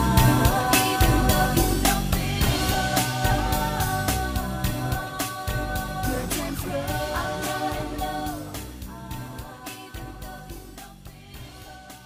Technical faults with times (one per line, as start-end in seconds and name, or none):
none